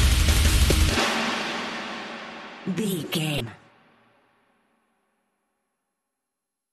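The audio has two brief glitches from damaged data in a compressed stream, at 0.68–0.72 s and 3.37–3.41 s. Corrupted frames break the decoder's sync, producing short blips.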